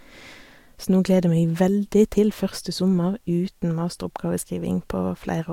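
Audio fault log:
No technical faults are present in the speech signal.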